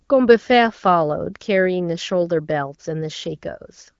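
No technical faults are audible in this speech.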